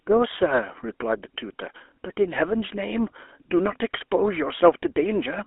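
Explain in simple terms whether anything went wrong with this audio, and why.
GSM full-rate codec damage runs from the very start to the very end. The speech sounds like an old mobile phone call: buzzy and gravelly, with nothing below about 300 Hz or above about 3.4 kHz. The codec rebuilds the voice from a rough model of the mouth and throat, fed by evenly spaced pulses that keep only a fraction of the original detail. That thin, coarse rebuild is the plainly audible roughness you hear.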